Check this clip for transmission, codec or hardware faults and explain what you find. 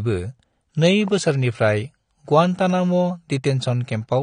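Two faults are audible: low-bitrate AAC compression throughout and a single loud pop early on.

Across the whole clip the speech sounds dull and smeared, with fizzy sibilants and nothing above 9.7 kHz. This is likely AAC compression: the encoder discards high bands and coarsely quantises the rest, consistent with roughly 32 kbps.

From 1.08 to 1.10 s a sharp loud pop, a few decibels above the speech, sits over it. The likely cause is a brief voltage spike, such as a switch or static discharge, added to the signal.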